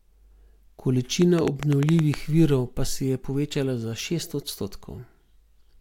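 From 1.22 to 2.15 s there's a train of clicks, about ten sharp ticks at an uneven pace averaging 8.7 per second, sitting well above the speech, right before "virov pa se je". It's likely interference or a faulty connection injecting repeated pulses.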